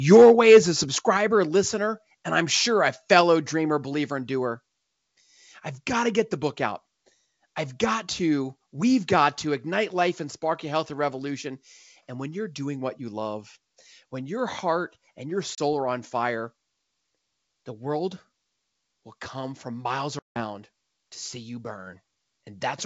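Microphone overload runs from 0.11 to 0.58 s at the start. The loudest syllables are about 5 dB over the converter's limit, so their tops are flattened and crackle with distortion. An input volume set too high is the likely cause.

Microphone volume stepped down at 0.17 s and again at 1.17 s. The level of both voice and background drops suddenly, by about 2 dB and then about 5 dB. The first drop comes inside the distorted stretch, likely the call software reacting to the overload by lowering the device's input gain.

Packet loss on an ADPCM call leaves a hard-edged hole of 30 ms at 15.55 s, which fits a few lost packets. A 170 ms gap follows from 20.19 to 20.44 s, which fits roughly fifteen. The missing audio is filled with silence, and the decoder's adaptive predictor and step size lose track of the sender's. The sound coming back after each gap is distorted until the decoder catches up. 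The G.722 wideband coding carrying the call runs at 64 kbit/s, keeping speech clear up to about 7 kHz.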